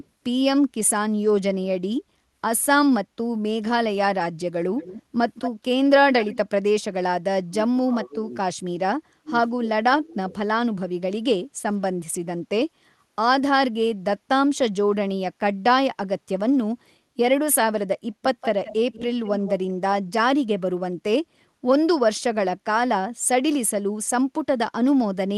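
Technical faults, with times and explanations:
4.77 to 5.03 s, 5.34 to 5.64 s and 6.11 to 6.38 s: echo leak. A delayed copy of the speech surfaces in three short scraps, trailing the original by 217 ms. Its level varies, from about 20 dB below the speech in the first scrap to about 10 dB below in the second and about 15 dB below in the third. The far end likely plays the call on a loudspeaker. Its echo canceller did not fully remove what its microphone picked up, so that residue came back.
7.46 to 8.47 s and 9.2 to 10.31 s: speech suppressed in double talk. In both stretches the speech drops in level while the other side is also talking. At its deepest the dip reaches roughly 20 dB. The affected portions add up to around 0.7 s in each stretch. This is likely an echo canceller that could not tell the local talker from the loudspeaker echo during overlap, so it turned everything down.
18.41 to 19.51 s: echo leak. 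A longer delayed copy of the speech appears here, now trailing by 179 ms. It sits about 15 dB below the speech, and it is spread over more than a second rather than in scraps. The cause is likely the same, a canceller letting loudspeaker pickup through and sending it back. The Opus coding band tops out near 12 kHz.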